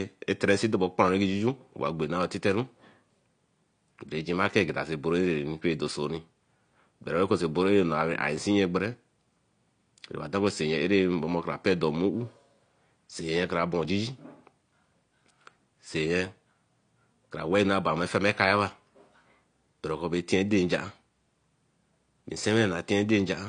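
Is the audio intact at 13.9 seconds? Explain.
No. At 13.85 s there is a dropped buffer (overrun), likely a few milliseconds of samples overwritten before being read, so the speech jumps ahead with no gap. Throughout, the audio is dull and smeared with nothing above 9.8 kHz, likely from AAC compression at a low bitrate, around 32 kbps.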